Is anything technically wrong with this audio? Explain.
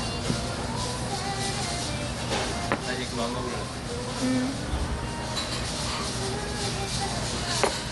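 Yes. Throughout, the audio was likely squeezed by Dolby Digital compression at a low rate, consistent with about 64 kbps. The encoder dropped everything above 11.4 kHz and filled starved frequency lines with dither noise, so the sound is plainly dull, with rough, fluttering noise clinging to tones.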